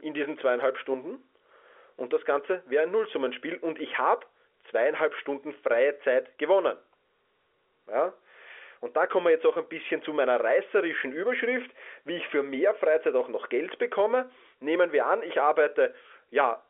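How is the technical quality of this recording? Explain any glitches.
One glitch stands out, a brief dropout in the speech carried over a G.711 A-law telephone path, whose 300 Hz to 3.4 kHz line band gives it the familiar narrow phone sound.

Packet loss with pitch repetition, 9.54 to 9.56 s, between "kommen wir jetzt auch" and "ein bisschen zu meiner": about 20 ms of audio went missing, which fits a single lost packet. The receiver filled the gap by looping the last pitch period, so the sound briefly holds with a buzzy, repeated quality before the speech resumes.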